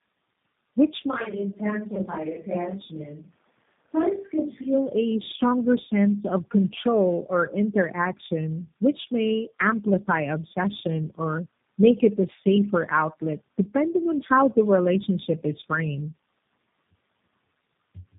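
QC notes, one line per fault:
Throughout: tandem speech coding. The call passed through three speech coders in a row: AMR-NB, AMR-NB again, then G.729A, with G.711 links between them. Each one re-encoded the previous coder's already degraded output, so the speech is rough, muffled and warbly, with nothing above 3.8 kHz.
1.12–4.72 s: switch to a distant microphone. The close microphone's signal likely dropped out and a farther microphone took over. The speech turns roomy and hollow with thinner bass, about 5 dB quieter, and has faint added room noise. The change is abrupt at both ends.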